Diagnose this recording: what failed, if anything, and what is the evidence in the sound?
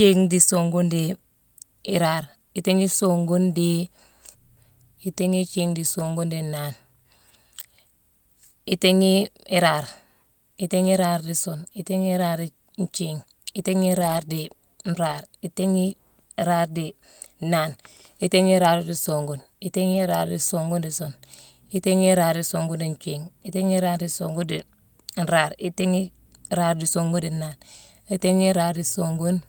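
Packets were lost on the network and each was lost packet rebuilt from error correction, replayed from a low-bitrate copy in the following packet. The speech never gaps but turns briefly rough and noisy at 5.99–6.05, 14.01–14.19 (longest, 100 ms), 15.07–15.13 and 19.93–19.99 s.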